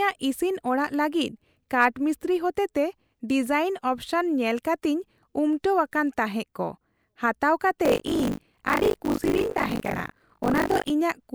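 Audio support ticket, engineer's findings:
Buffer tearing in the speech, 7.84 to 10.91 s: robotic 50 Hz rattle, only while the voice is present. Writer and hardware reader crossing inside each 20 ms period, so roughly 40% of every buffer replays audio about 40 ms stale. Check ring-buffer pointer sync.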